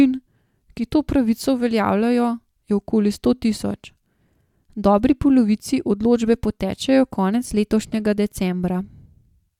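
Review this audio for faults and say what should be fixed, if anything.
Nothing to fix here: no faults are audible anywhere in the speech, so no corrective or preventive action is needed.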